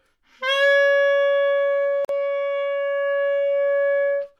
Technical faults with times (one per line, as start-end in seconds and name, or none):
2.05-2.09 gap at a join of encoded pieces